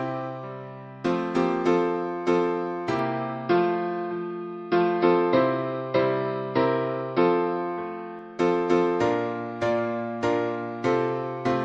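From 2.99 s to 8.19 s the recording likely moves to a poorer input device, then returns to the original one. That device passes nothing above 5.5 kHz, so the sound abruptly turns dull and boxy and then clears again at 8.19 s. Both changeovers are seamless, with no gap, and the level stays roughly the same. The substitute device also brings its own faint background noise, sitting around 50 dB below the signal.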